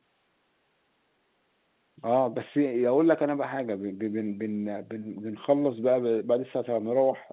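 Nothing in this speech recording points to a technical fault. It comes through a telephone channel with A-law G.711 coding, heard as nothing above 4 kHz, which fits 8 kHz sampling, and a faint hiss well below the voice that rises and falls with its level.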